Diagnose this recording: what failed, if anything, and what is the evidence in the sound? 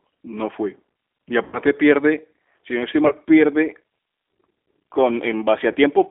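The codec stage is at fault throughout: this speech has been through G.729 (the G.729A variant) at 8 kbit/s. The band runs only from about 250 Hz to 3.5 kHz, and the voice has a rough, slightly synthetic grain. A simple telephone band filter would narrow the sound but keep it smooth. This grain comes from rebuilding the speech out of a vocal tract filter, a pitch predictor and a few pulses per frame.

The network stage failed in three places, and the decoder covered each with VoIP packet loss concealment. The longest is from 1.44 to 1.59 s, about 90 ms of lost audio, which points to roughly three 30 ms packets. Shorter ones follow at 3.07 to 3.13 s, just after "si no estoy", and at 5.72 to 5.77 s, each about 30 ms. A hard dropout would leave silence or a click. These gaps instead hold a stretched continuation that fades, because the decoder repeats its last pitch and filter at falling gain. 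The voice then stays weak for a short while after the packets return.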